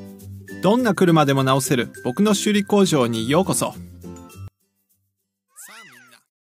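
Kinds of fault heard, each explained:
One channel inverted: From 4.48 s to the end of the clip, the sound suddenly drops by about 28 dB, leaving only a faint remnant of what came before. A collapse this deep and sudden is likely caused by one stereo channel having reversed polarity. When the two channels are then summed to mono, whatever they share cancels out, and only the small difference between left and right survives to be heard.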